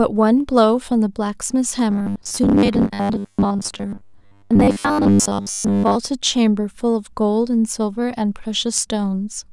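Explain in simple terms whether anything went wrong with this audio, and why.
From 1.91 s to 5.96 s the speech turns into robotic sound from repeated short buffers: a rigid, metallic 100 Hz buzz that only roughly follows the words. This is likely caused by a 10 ms slice being replayed over and over while most real audio is skipped. A pitch shift would still rise and fall; this buzz stays fixed.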